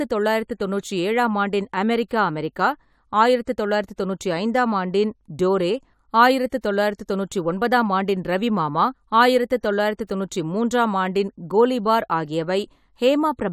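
No technical faults occur in this recording, so there is nothing to describe in time order.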